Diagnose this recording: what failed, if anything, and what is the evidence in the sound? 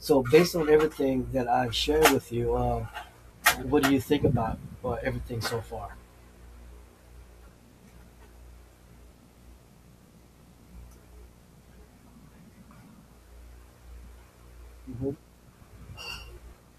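Analogue wiring failed. Video or display buzz starts at 2.71 s, after "i've shared with you", and continues to the end. It is a 60 Hz field-rate buzz with hash, about 30 dB below the speech.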